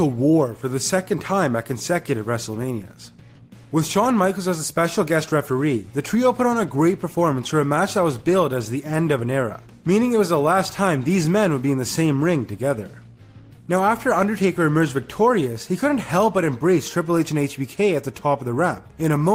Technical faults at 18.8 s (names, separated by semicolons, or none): none